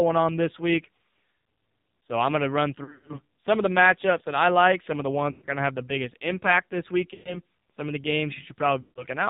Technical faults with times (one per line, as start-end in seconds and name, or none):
0.00-9.30 AMR narrowband mobile codec
2.84-3.18 lost AMR speech frames
5.32-5.47 lost AMR speech frames
7.14-7.38 lost AMR speech frames
8.82-9.07 lost AMR speech frames